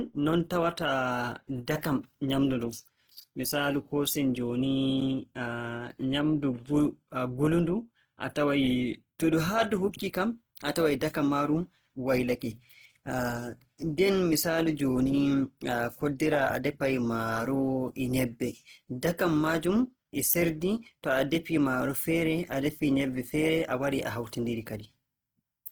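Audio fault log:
throughout: Opus compression. The sound points to the encoder likely running its CELT music mode at a very low rate, around 16 kbps, with too few bits to code each band's detail. It keeps every band's energy but fills the gaps with copied lower bands or noise, so the speech turns rough, grainy and noisy in texture rather than hollow or swirling. The damage is plainly audible, though the bandwidth stays full, reaching about 20.2 kHz.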